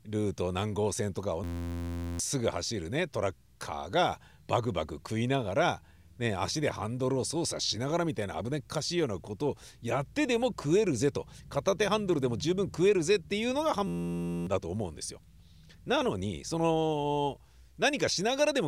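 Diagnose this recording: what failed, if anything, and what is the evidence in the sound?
System hang loop at 1.44–2.19 s and 13.87–14.47 s, a driver or buffer failure. Each time, the speech gives way to a steady buzz at 86.1 Hz. The hardware replayed one 11.61 ms slice, which fits a 512-sample buffer, while the system froze, losing roughly 0.7 s of speech.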